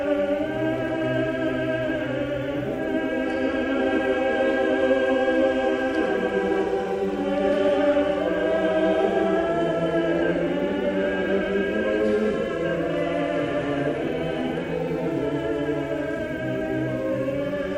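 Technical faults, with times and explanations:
No faults are audible anywhere in the clip.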